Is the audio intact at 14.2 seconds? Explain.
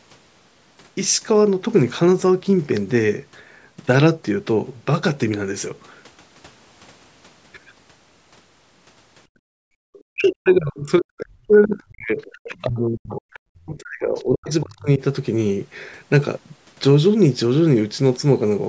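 No. The moment falls inside a stretch of speech suppressed in double talk, running from 10.08 to 15.02 s. Both ends of the call were likely talking at once, and the echo canceller, unable to tell the near talker from its own loudspeaker echo, pulled the level down. Across around four seconds in total, the speech dips and breaks into fragments, at its deepest falling by roughly 40 dB.

On top of that, the other side's voice is leaking through from 14.15 to 14.24 s. The far end's audio, played on the talker's loudspeaker, was likely not fully removed from the microphone signal by the echo canceller. The residue surfaces as a brief, faint scrap of a second voice, roughly 30 dB below the speech, lasting about 90 ms. It overlaps the already suppressed speech right at the requested moment.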